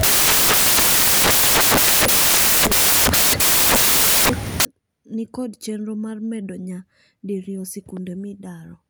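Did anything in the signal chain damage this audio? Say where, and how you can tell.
Yes. From 0.0 s to 4.65 s the speech carries loud, harsh white noise, in a sample-format conversion stage where the samples were built from the wrong bytes. The noise then stops abruptly, and clean speech resumes with "ni kond chenro mar". The fast-changing low bits ended up as the most significant part of each value. Clipping would not make the noise itself this loud.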